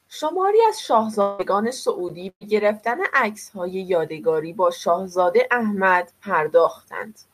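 At 1.21 s the speech breaks off until 1.42 s. The last sound is stretched into a fading sound for about 175 ms, with no silence after it. About 180 ms of speech never returns. A long network dropout is the likely cause.

From 2.29 to 2.44 s comes a burst of packet loss. About 120 ms of audio went missing. The receiver carried the previous sound forward and let it fade, then fell quiet for about 70 ms. The speech resumes further on, with the gap skipped.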